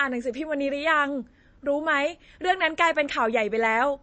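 From start to finish the speech carries plainly audible MP3 compression damage, likely from encoding at a low bitrate, with the swirly, watery smear suggesting something near 32 kbps. The encoder has cut everything above 8.4 kHz, so s sounds lose their hiss and turn dull and chirpy, and consonant attacks blur. On a spectrogram this shows as a flat ceiling at 8.4 kHz, with speckled, flickering holes below it where weaker frequency lines drop in and out.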